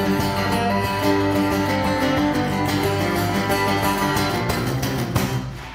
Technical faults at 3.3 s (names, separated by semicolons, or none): none